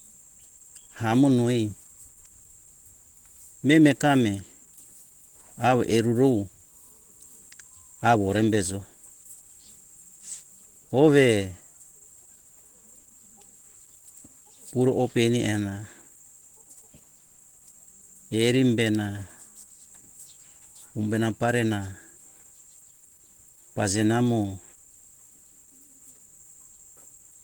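Throughout the whole clip the speech sounds hoarse, rough and muffled, with a grainy, noisy texture in place of clean tone. This is likely Opus compression running in its hybrid speech mode at a low rate, which fits roughly 16 kbps.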